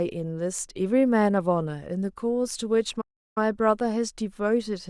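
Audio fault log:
3.01–3.38 s, playback stall: the speech cuts out abruptly in mid-flow and the output sits in silence for roughly 350 ms before the sound picks up again. The gap is hard-edged on both sides, with no fade or smearing, so it reads as the output simply being starved rather than as anything in the recording itself. The likely cause is the player running short of buffered data, or its audio thread being blocked briefly, until it recovered.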